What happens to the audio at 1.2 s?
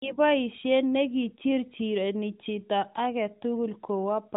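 At 1.2 s the speech is intact, passing through the AMR narrowband mobile codec as it does throughout, with its top end stopping near 3.8 kHz.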